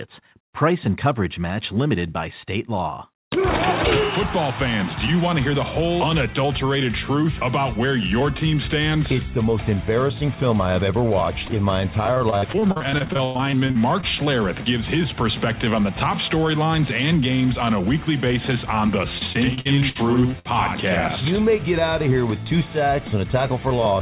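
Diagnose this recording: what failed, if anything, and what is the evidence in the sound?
The network leg of the call broke up twice, causing repeated packet loss (robotic sound) from 12.14 to 14.05 s and again from 19.19 to 20.47 s. Gaps of up to 100 ms keep getting patched by stretching the last sound, so the 4 kHz-limited audio turns choppy, with pieces missing.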